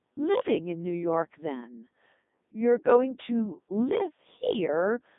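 Codec 2 vocoder damage runs throughout: the speech is rebuilt from pitch, voicing and envelope at 3.2 kbit/s, sounding robotic and buzzy, with nothing above 3.8 kHz.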